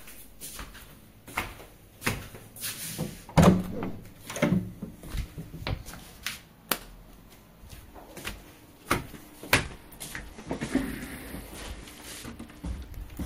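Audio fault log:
9.54 to 13.01 s, Bluetooth SBC bit pool drop: the wireless link appears to have become congested, and the sending device cut the SBC bit pool to keep the stream alive. The dull, grainy result fits a fall from around 31 to about 12, near 88 kbps. With so few bits, the upper sub-bands are starved or left empty and the rest are coarsely quantised. The treble therefore goes dull and a gritty noise rides under the audio until the rate recovers.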